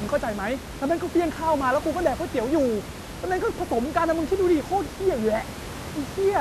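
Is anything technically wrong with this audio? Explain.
No, nothing technically wrong.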